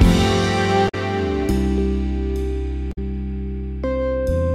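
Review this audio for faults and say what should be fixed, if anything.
Damaged data in a compressed stream occurs at 0.85–0.95 s and 2.89–2.98 s. Corrupted bytes make the decoder misread those frames and resynchronise at the next header, producing a brief glitch at each point. Verify the stream with checksums and re-fetch damaged frames before decoding.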